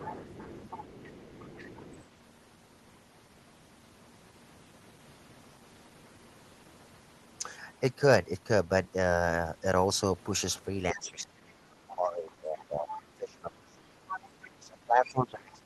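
From 0 to 2.04 s, a second voice sits faintly under the talker, roughly 20 dB down. This is the other side's voice leaking through. It is likely loudspeaker echo that the echo canceller failed to remove.

From 10.92 to 13.94 s, the talker's speech sinks for about three seconds. The deepest drop is roughly 25 dB. This is speech suppressed in double talk. Both sides likely spoke at once, and the canceller turned everything down.

Inside that stretch, from 12.91 to 13.02 s, a louder scrap of the far voice breaks through, only about 10 dB below the speech. This is likely residual echo.

From 14.11 to 14.2 s, another short leak comes through at a similar level. It likely comes from the same loudspeaker path.

From 14.17 to 14.4 s, the talker dips again, by roughly 10 dB. This is likely a brief double-talk suppression.

From 14.43 to 14.5 s, a very faint scrap of the far voice leaks in, around 25 dB down. 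This is likely the loudspeaker echo again.

From 14.6 s to the end, the speech is suppressed deeply again, by roughly 25 dB. This is likely another double-talk clash.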